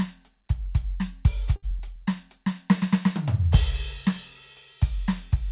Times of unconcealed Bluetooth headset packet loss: none

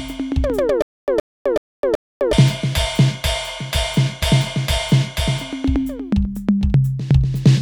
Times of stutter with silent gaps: 0.82-2.33

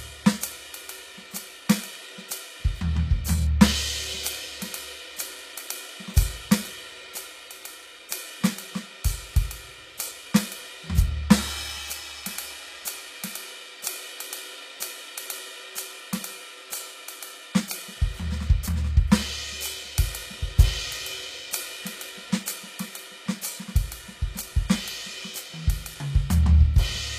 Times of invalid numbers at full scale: none

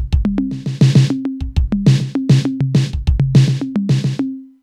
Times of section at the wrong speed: none

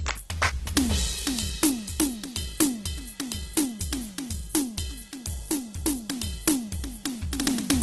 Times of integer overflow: 0.77, 1.63, 2.00, 2.60, 3.57, 4.55, 6.48, 7.70-7.82

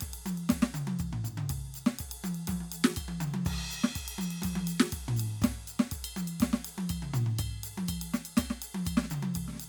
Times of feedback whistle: none

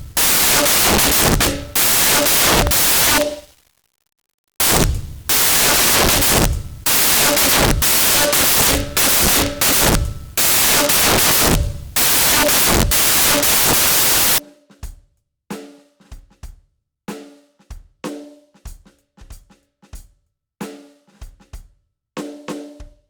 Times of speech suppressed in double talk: none

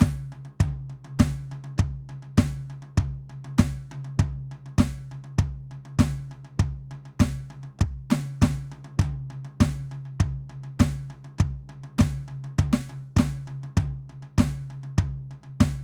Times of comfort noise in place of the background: none

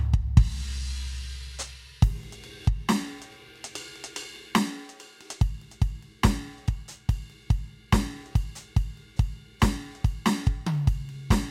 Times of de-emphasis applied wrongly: none

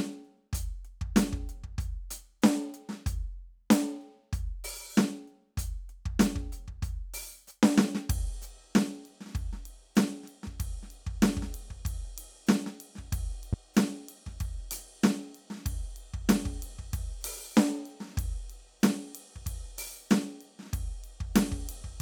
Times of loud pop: 13.53-13.55

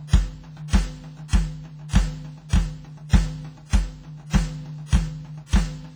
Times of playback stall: none

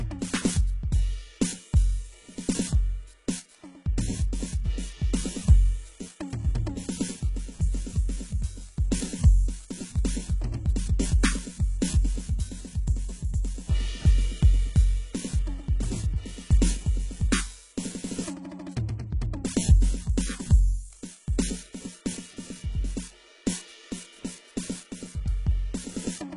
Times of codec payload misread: none

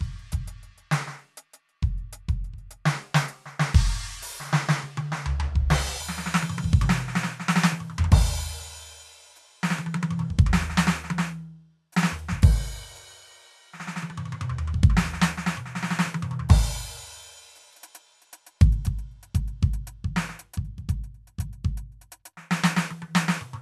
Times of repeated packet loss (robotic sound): none

